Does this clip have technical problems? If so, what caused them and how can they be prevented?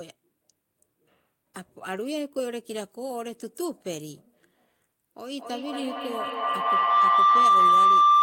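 Yes. A feedback howl starts at 5.33 s and runs to the end, peaking about 13 dB above the speech as a tone near 1 kHz that pulses roughly every fifth of a second. Unlike echo, whose repeats fade, each pass through the microphone-to-loudspeaker loop grows louder until only the favoured tone remains. Muting one device or using headphones when two share a room prevents it.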